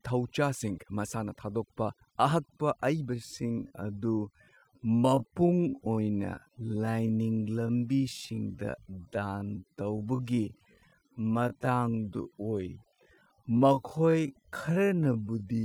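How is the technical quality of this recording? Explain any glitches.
The technical quality is poor, with two faults in the speech.

Overdone noise removal runs through the whole clip. A noise reduction stage set far too aggressively has cut individual frequency bands whenever they sat near its noise estimate, taking quiet parts of the voice too. The background drops and breaks up into twinkling specks.

A time-stretched section runs from 3.13 s, right after "ꯃꯁꯥꯅ ꯊꯥꯗꯣꯛꯄ ꯑꯍꯛꯄ", to the end. The likely cause is software slowing the audio to about 0.55 times its speed while holding pitch by repeating short pieces. The pace drops abruptly at the same pitch, and the speech drags.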